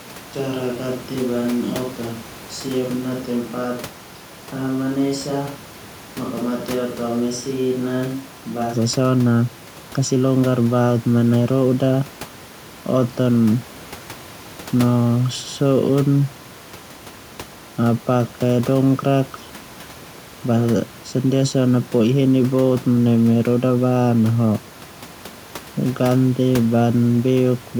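From the start to 8.73 s the speech sounds hollow, roomy and thin, about 5 dB quieter, likely a switch to a distant microphone before the close one returns.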